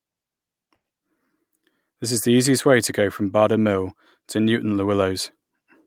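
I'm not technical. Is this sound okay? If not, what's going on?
No. Near the start, from about 0.75 to 0.86 s, the speech briefly hangs: a sound is held a little too long, with a faint buzz or dip, before carrying on. This is a short stall from a late packet. One piece of the audio arrived late, so the player ran out of sound and stretched the last bit for about 90 ms while waiting. Nothing is lost; everything after it is simply shifted about 90 ms later.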